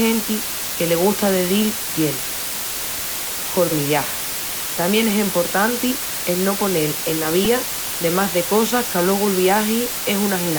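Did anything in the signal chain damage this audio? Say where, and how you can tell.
Yes. Low bit depth with dither runs throughout, introduced at a sample-format conversion. The speech sits on a constant, even hiss nearly as loud as the speech itself, with no harsh distortion, which points to reduction to only 3 bits with dither randomising the rounding error.

A repeated buffer occurs at 7.45 s, in the driver or buffer stage. A tiny 2.67 ms slice, consistent with a 128-sample buffer, plays three extra times with hard joins. This produces a brief click-like buzz rather than a stutter, and about 7 ms of new audio is lost.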